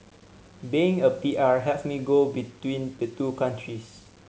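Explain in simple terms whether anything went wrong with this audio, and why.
Something did go wrong: the speech has a grainy, fizzy edge the whole way through, from start to about 4.3 seconds, roughest on the quietest bits. That's low bit depth without dither, likely from rounding to about 8 bits with nothing smoothing the error, so the grit tracks the voice.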